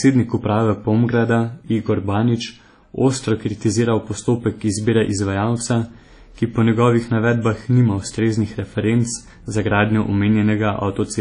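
Throughout the speech the sound rings and turns washy, with a hiss that swells and fades with the signal and nothing above 10.1 kHz. This is likely WMA compression at a low bitrate, consistent with about 32 kbps, smearing quantisation noise and dropping weak detail.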